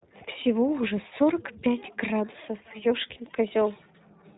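Throughout, the speech carries iLBC codec damage. The band stops at 4 kHz, and the voice sounds plainly rough and slightly synthetic, which fits iLBC's 15.2 kbps mode with 20 ms frames. Plain low-pass filtering would muffle the sound without adding this coarse, synthetic grain.

From 1.10 to 1.13 s and again from 3.14 to 3.19 s, lost iLBC frames are covered by the decoder. Each time it repeats the last pitch cycle blended with noise, so the gap sounds like a brief held, buzzy vowel. A silent dropout would sound different, and because each frame stands alone the voice recovers cleanly straight afterwards.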